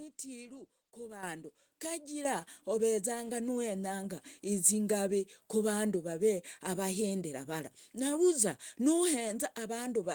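Microphone volume steps up at 1.23 s, by about 10 dB, and at 2.25 s, by about 7 dB. Raised input gain lifts speech and background together.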